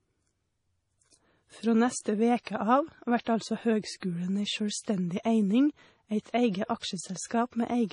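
Throughout the speech, the treble stops dead near 10.5 kHz. Weak detail flickers in and out, giving a watery, swirly texture. S sounds turn metallic. Attacks smear. The likely cause is heavy MP3 compression, the damage fitting a bitrate around 32 kbps.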